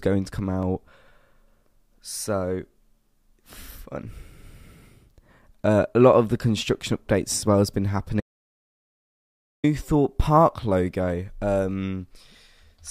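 Speech with an audio dropout to silence from 8.20 to 9.64 s, right after "as well has been": 1.43 s of silence with no room tone, likely from a lost input link.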